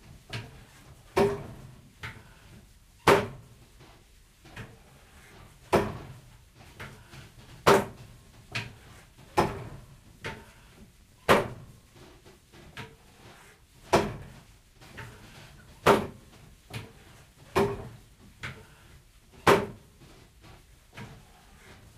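From 11.0 to 13.6 s the sound carries a 100 Hz buzz, the mark of a filter restarted on every block. Its state resets each block, consistent with roughly 10 ms blocks, leaving small spikes on the waveform and evenly spaced vertical lines, or 100 Hz harmonics, on a spectrogram.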